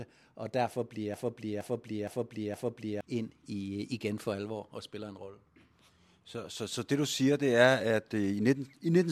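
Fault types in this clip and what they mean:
Broken-record loop: from 1.14 to 3.01 s the same 0.47-second fragment of speech plays back to back four times, identical each pass, likely because the playback or stream stalled and kept reissuing its last buffered piece, so the intervening audio is missing.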